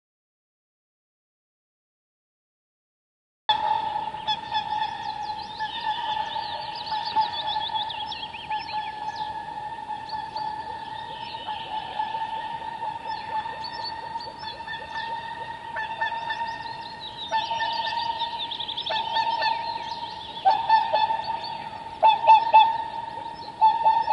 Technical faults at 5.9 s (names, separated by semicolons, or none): none